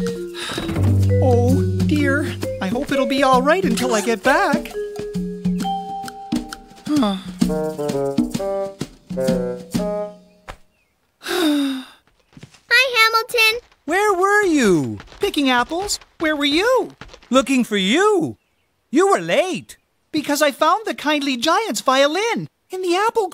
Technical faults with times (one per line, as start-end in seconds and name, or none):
none